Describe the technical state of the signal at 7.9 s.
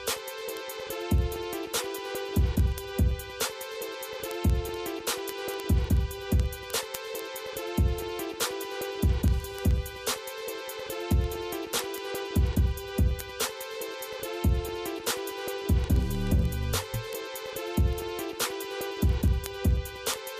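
Sharp, uneven ticks recur roughly every 0.07 s from 0.14 to 20.38 s: word clock ticks, where an unlocked receiver clock, a few hundred ppm off, periodically drops or repeats one sample.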